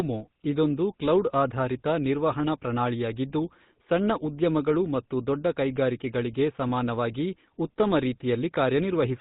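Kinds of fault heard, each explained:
GSM full-rate codec: The speech has passed through the original GSM mobile phone codec for its whole length. It keeps a simple model of the vocal tract and feeds it a coarse pulse train, discarding much of the fine detail in the excitation. The result here is a plainly audible buzzy, gravelly roughness on the speech. Nothing survives above 4 kHz, so the sound is dull and narrow. The damage fits a 13 kbps GSM full-rate stream.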